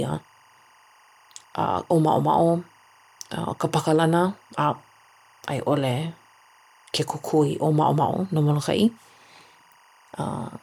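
Linear timecode running at 23.976 frames per second is bleeding into this speech recording from a neighbouring track or cable, adding a faint chirping warble near 1 and 2 kHz throughout, well below the voice.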